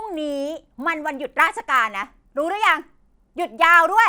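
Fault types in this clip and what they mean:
Resampler restarted on every block: each 20 ms block was converted from 24 kHz to 48 kHz separately. The edge errors make a 50 Hz buzz under the speech, visible as regularly spaced vertical lines on a spectrogram.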